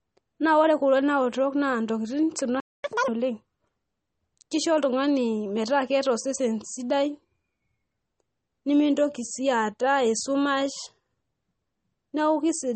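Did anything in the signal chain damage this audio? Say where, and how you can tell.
Yes. At the codec stage, a hard spectrogram ceiling at 8.4 kHz and swirly, watery speech point to MP3 compression, likely around 32 kbps, with weak lines flickering out.

At playback, the waveform goes flat from 2.60 to 2.84 s: a playback stall of about 240 ms, likely from the player starving for data or blocking.

Immediately after, from 2.84 to 3.08 s, catch-up at higher speed plays the backlog at twice speed; pitch jumps sharply upward, and harmonics spread apart on the spectrogram.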